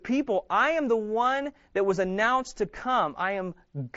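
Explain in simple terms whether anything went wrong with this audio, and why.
Nothing went wrong here: the speech comes across as ordinary wideband Bluetooth headset audio, with the top end stopping at about 7.7 kHz the way that kind of headset link is built to.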